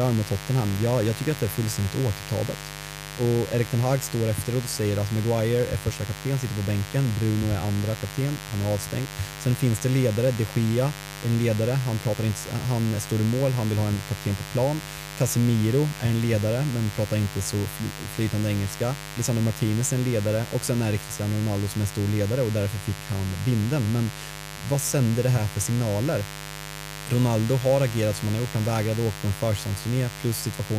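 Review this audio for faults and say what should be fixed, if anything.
Mains buzz runs through the whole recording. Switching spikes from a dimmer, rectifier or poorly shielded cable are getting into the signal path twice per cycle of the 50 Hz supply, producing a dense ladder of harmonics at 100 Hz spacing that climbs into the kilohertz range. The result is a steady, raspy buzz sitting under the speech from start to finish, loud enough to be plainly heard at roughly 15 dB below the speech itself. Prevent it by keeping microphone and interface cables away from dimmers and switching supplies, using balanced, properly shielded leads, and powering the recording chain from a clean, common ground.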